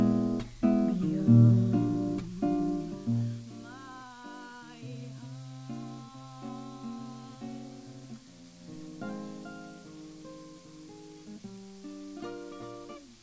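Nothing stood out as a fault on listening to this recording.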